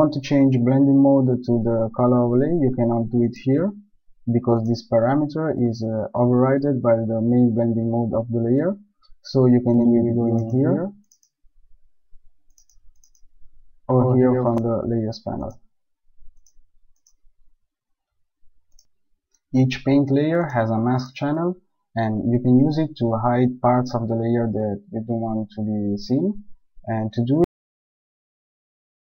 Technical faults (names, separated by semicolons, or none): doubled audio track; cut-off end